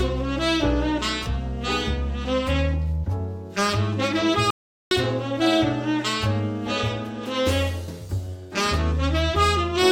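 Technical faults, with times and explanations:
4.50–4.91 s, audio dropout to silence: the sound cuts abruptly to silence for 0.41 s with no room tone, likely from a lost input; the waveform goes flat and the spectrogram shows a blank vertical band.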